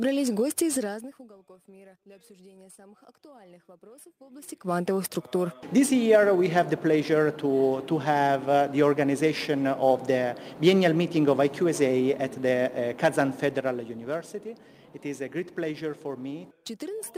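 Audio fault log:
No faults found; nothing in the audio calls for correction.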